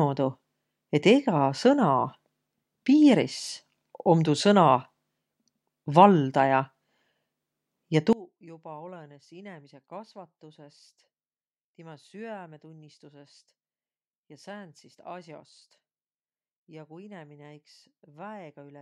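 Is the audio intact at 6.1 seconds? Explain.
Yes, the speech at 6.1 seconds plays through intact, with no audible dropout, click, distortion or other fault at that moment.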